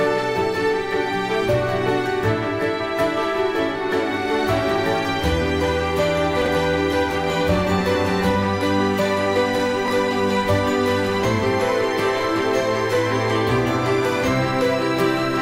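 At 6.42 to 6.48 s and again at 9.86 to 9.90 s, chunks play out of order: a 20 ms block arrives late and sounds two chunks after its proper place in the first case, one chunk after in the second. Each event leaves three hard joins, so it is a brief jumbled stutter. Unlike a dropout or packet loss, no audio is missing and there is no gap. The material is all present, just shuffled.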